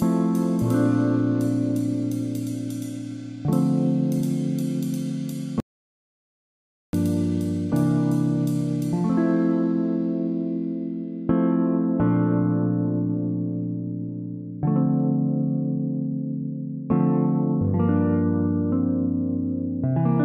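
At 5.60 s the audio drops out to silence and returns at 6.93 s, a gap of about 1.33 s. The input was likely lost while silence kept being written. Unlike a natural pause or noise gate, the gap holds no room tone at all.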